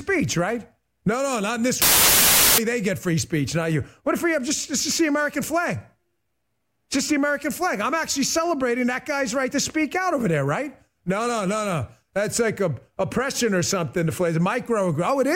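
From 1.82 to 2.58 s the speech turns into loud, broadband hiss: samples built from the wrong bytes. The reader assembles each sample's bytes misaligned or swapped, so the noisy low bits dominate. A spectrogram shows flat full-band noise, and the waveform looks like a dense, clipped-looking block.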